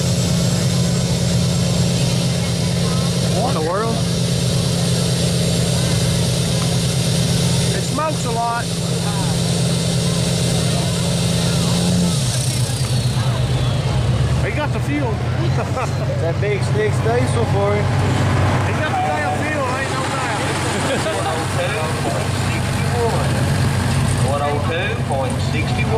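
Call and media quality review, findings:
No audible faults found.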